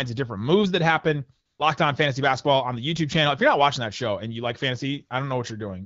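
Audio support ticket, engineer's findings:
Steady, smooth hiss replacing real background, 1.45–1.59 s, switching in and out over about 140 ms. AMR comfort noise: phone's voice activity detection judged the talker silent, halted speech frames, receiver synthesized noise from coarse level/spectrum parameters. Light wideband codec colouring, fitting AMR-WB around 12.65 kbit/s.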